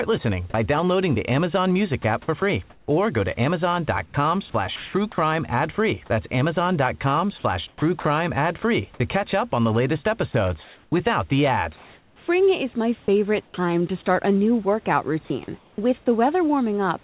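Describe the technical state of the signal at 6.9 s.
At 6.9 s the speech signal is intact with no fault present, carried through the call path's narrowband telephone coding that leaves nothing above 4 kHz, with the room noise sitting about 35 dB below the speech.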